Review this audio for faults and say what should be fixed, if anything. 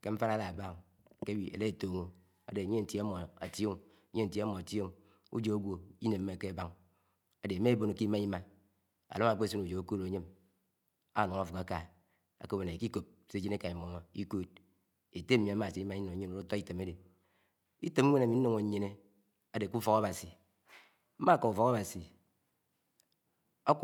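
No faults are audible; nothing needs fixing.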